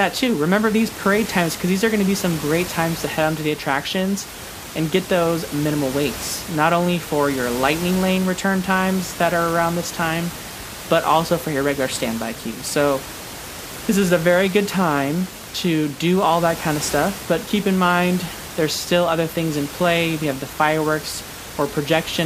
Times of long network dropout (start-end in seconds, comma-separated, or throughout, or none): none